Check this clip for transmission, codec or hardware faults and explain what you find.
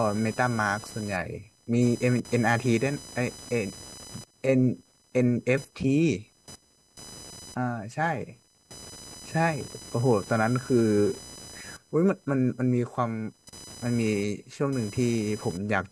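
One hardware fault runs through the whole speech clip: computer activity noise. It is present from start to finish. A buzzy, whining chirp pulses at roughly 1 kHz, about 20 dB below the speech. Processor or peripheral load shifts the shared ground, so the noise tracks the computer's activity, not the talking.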